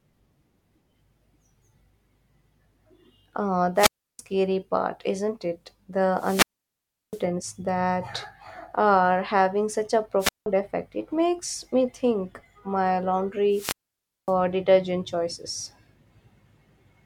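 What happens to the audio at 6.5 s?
At 6.5 s the speech drops into a hole of near silence lasting about 0.71 s, within a disturbance from 6.16 to 7.24 s where hiss rises first and the voice then returns. This is a wireless microphone squelch dropout: the radio signal faded and the receiver's squelch muted the output.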